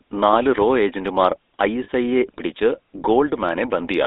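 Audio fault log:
throughout, GSM full-rate codec: the speech carries a plainly audible buzzy, gravelly roughness and sits in a narrow 250 Hz to 3.6 kHz line band. The vocal tract is modelled and driven by sparse, regularly spaced pulses, which gives a rasp that band-limiting or lossy music codecs would not produce.
1.84 to 1.89 s, lost GSM frames: just after "നാല് റോ ഏജന്റുമാർ", about 40 ms of sound is held as a brief metallic ring, which fits two missing 20 ms frames. The last good frame is repeated, so the gap rings instead of going silent or clicking.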